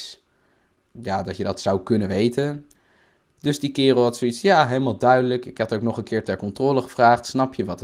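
Nothing faulty is audible anywhere in this speech recording.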